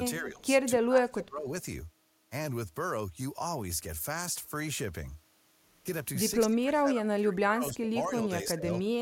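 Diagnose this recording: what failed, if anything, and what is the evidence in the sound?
The speech drops in level three times: a brief, shallow dip from 0.2 to 0.44 s of roughly 10 dB, then deeper cuts from 0.76 to 1.52 s and from 6.43 to 8.68 s, each falling by around 25 dB. The failed stage is call processing, likely speech suppressed in double talk: the echo canceller mistook the near talker for loudspeaker echo while the far side spoke. On a waveform the envelope sinks in those three spans.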